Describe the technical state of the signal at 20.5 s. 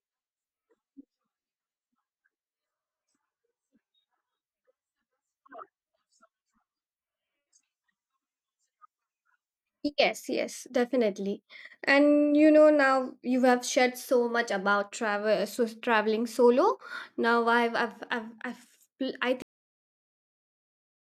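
At 20.5 s the signal is pure digital silence, part of a cut-off end that begins at 19.42 s and runs to the close of the clip at 21.05 s. The final stretch of audio was never written out, so the speech is chopped off mid-sound rather than fading. On a waveform the trace snaps from active signal to a flat line with no decay tail. A spectrogram shows every frequency band going blank at once.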